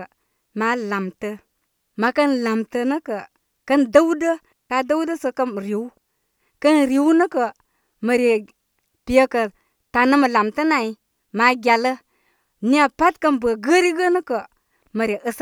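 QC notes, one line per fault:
4.53–4.70 s, digital wireless dropout: the speech cuts to near silence for about 173 ms, then returns as abruptly as it left. The hole is clean, with no hiss, crackle or burst of noise on either side, which is the signature of a digital radio link rather than an analogue one. The receiver lost too much of the data stream to rebuild the audio, so it muted with a very brief fade until the link recovered.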